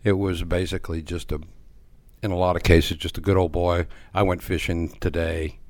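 At 2.60 s the speech and its background noise step up together by about 9 dB in a single instant, then drop back to the earlier level at 2.93 s. This is a sudden gain jump: the level changes from one sample to the next with no fade in or out. The likely cause is a gain setting or bit shift applied directly to the digital signal without a ramp, then removed the same way about a third of a second later.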